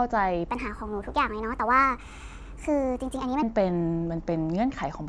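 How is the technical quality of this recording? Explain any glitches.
The recording has one clear fault, a wrong sample rate, running from 0.49 s to 3.43 s. Over that span the speech plays back 1.38 times too fast and about 5.5 semitones too high, so it sounds hurried and chipmunk-like before snapping back to normal. The samples are being clocked out faster than they were captured, with no rate conversion, so speed and pitch rise together by the same ratio, which fits 16 kHz audio played at 22 kHz.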